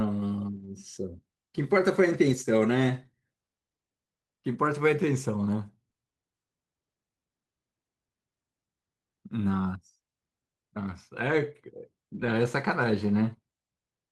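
Speech, with five spots where lost packets were rebuilt from error correction: 0.55 to 0.65 s (60 ms, which fits three 20 ms packets), 2.27 to 2.33 s, 4.53 s, 11.27 to 11.33 s and 12.21 to 12.27 s (40 ms each except the 20 ms one at 4.53 s). Each lost stretch was replaced by the low-bitrate copy carried in the following packet, so nothing drops out, but those frames sound coarser and hissier. A spectrogram shows short blocks of blurred, grainier texture with noise between the harmonics, and the waveform stays continuous. At 5.89 to 5.97 s there are two back-to-back instances of short concealed packet loss, each 20 ms. The receiver bridged the hole by extending the preceding sound and then cross-fading back into real audio, which gives a brief smeared wobble. On a spectrogram this looks like harmonics or noise stretched flat across the gap, and the waveform shows a repeated, slightly decaying pattern rather than a silent gap.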